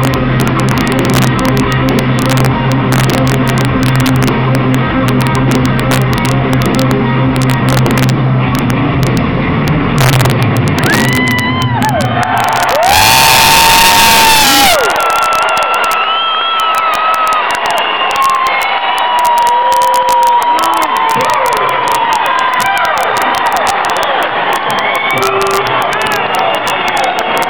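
Across the whole clip, the loudest peaks break into violent, sharp cracks, harsher and more sudden than ordinary clipping. This is integer overflow. The level was pushed only about 1 dB past full scale, so just a small fraction of samples, under one percent, crossed the limit. Instead of being held at the ceiling, each of those samples wrapped around to the opposite extreme, producing a full-range jump heard as a crack on each of those peaks.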